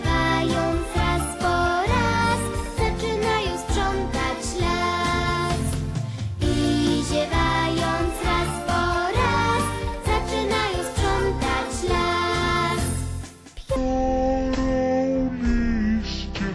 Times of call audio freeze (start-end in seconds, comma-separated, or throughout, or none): none